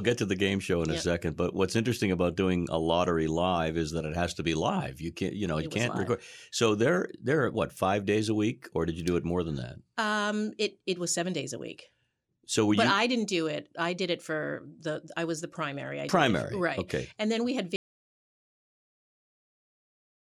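At 17.76 s, after "then we had", there's an audio dropout to silence: silence, no room tone, to the end, likely a lost input.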